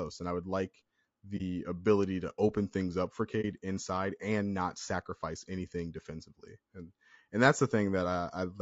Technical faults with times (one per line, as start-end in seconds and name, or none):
0.00-8.61 low-delay AAC compression
1.37-1.42 AAC frame loss with muting
3.41-3.44 AAC frame loss with muting